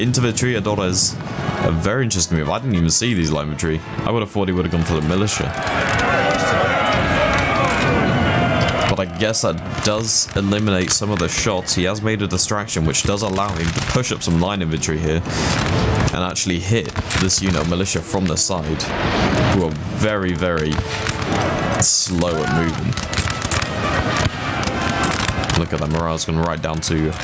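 Gain pumping runs right through the clip, with the gain swinging by around 20 dB. The likely cause is the gain being set far too high with a fast limiter clamping down, leaving everything squashed. The call's microphone processing trims the lowest bass and leaves nothing above 8 kHz.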